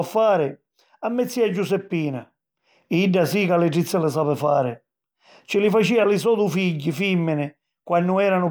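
Nothing technical goes wrong anywhere in this speech recording, so there's no fault to point to at any moment.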